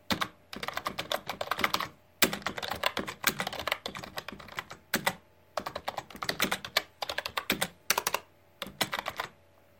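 Two bit error spikes occur, at 0.65 s and 8.87 s, each a single corrupted sample where one flipped bit throws the value off by a power of two before it snaps back. Each is heard as a brief broadband tick, about -32 dBFS and about -26 dBFS respectively.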